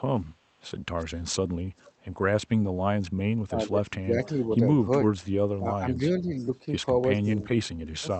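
From 0.98 to 1.91 s, 4.24 to 4.44 s and 6.39 s to the end, an echo leak adds a faint repeat of the speech 363 ms late, about 20 to 30 dB down. It is likely a loudspeaker return the canceller missed, and it sounds like a distinct copy, not a reverberant smear. Speech suppressed in double talk makes the talker dip at 3.47 to 4.36 s (up to about 20 dB), 5.59 to 6.3 s (about 10 dB) and 7.25 to 8.07 s (about 25 dB). This is likely the canceller ducking both sides, so the voice itself sinks rather than gaining an added copy.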